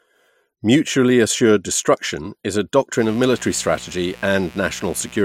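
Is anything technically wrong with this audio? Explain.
Yes. From 2.96 s to the end, a steady, raspy mains buzz sits about 25 dB below the speech: 60 Hz switching spikes from a dimmer, rectifier or unshielded line, with harmonics reaching several kHz.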